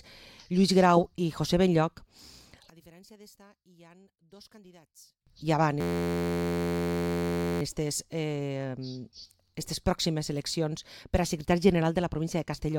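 From 2.70 to 5.27 s the level collapses by about 29 dB into a faint residue, likely one channel inverted cancelling on mono summing; the waveform shrinks sharply there.

From 5.81 to 7.62 s a system hang loop repeats an 11.61 ms slice, fitting a 512-sample buffer, as a steady 86.1 Hz buzz. The spectrogram shows evenly spaced harmonic lines, and the waveform shows identical repeating cycles.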